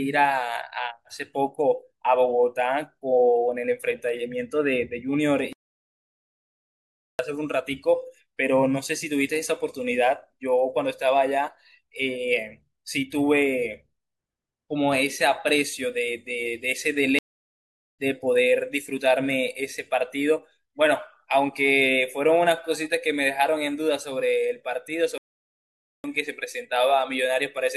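Playback stalls at 5.53 to 7.19 s, 17.19 to 17.99 s and 25.18 to 26.04 s cut the speech mid-flow into silence for about 1.7 s, 0.8 s and 0.9 s, likely because the player ran short of data or its thread was blocked.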